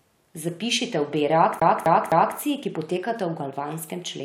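A CD stuck on one turn runs from 1.60 to 2.37 s in this speech. A scratch on the disc knocks the laser back one track at the same point on each rotation, so one slice of about 0.26 s is played three times in a row, with a brief mute at every jump. The result is a quick, regular stutter, the familiar sound of a skipping CD, before playback breaks free and continues into "ki potekata".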